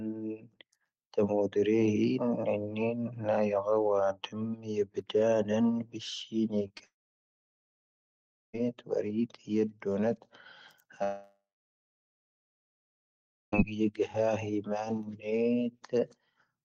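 At 6.67 to 6.72 s and again at 6.78 to 6.81 s, the speech briefly smears and wobbles. These are short concealed packet losses: about 20 ms of audio arrived too late each time, and the receiver bridged each gap by extending the preceding sound before blending back.

From 6.85 to 8.55 s the sound trails off into a fading buzz or hiss and then about 1.6 s of silence, and from 11.03 to 13.54 s the same happens with about 2.1 s of silence. Both likely reflect a long network dropout, in which 1.7 s and then 2.5 s of speech never arrived and is simply skipped when the audio resumes.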